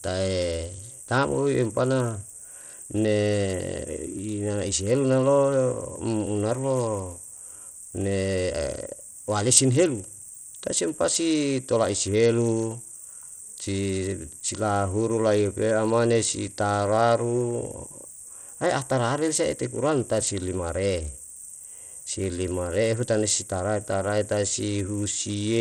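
Speech runs through the whole clip with plainly audible codec damage. The treble thins out and flickers. A gritty, aliased edge rides on the voice. The likely cause is Bluetooth SBC compression, with a starved bit pool that fits a rate near 80 kbps.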